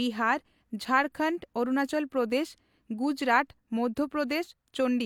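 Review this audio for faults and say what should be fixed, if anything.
Nothing here needs fixing, as no faults turn up anywhere in this speech clip.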